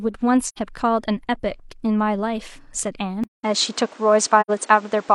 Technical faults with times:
0.46-0.58 AAC frame loss with muting
3.24-5.14 input switched to a poorer device
4.40-4.50 AAC frame loss with muting

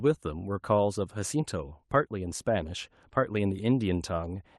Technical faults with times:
none

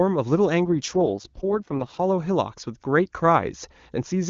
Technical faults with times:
0.65-2.00 AMR rate drop

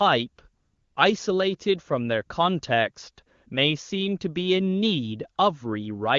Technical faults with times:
0.59-0.95 AMR comfort noise

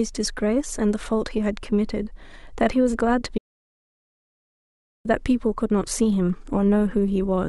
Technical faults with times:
3.38-5.05 audio dropout to silence

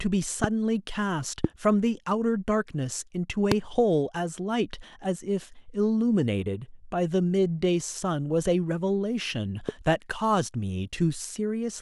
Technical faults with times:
0.44-0.46 loud pop
1.44-1.47 loud pop
3.52-3.54 loud pop
9.69-9.71 loud pop

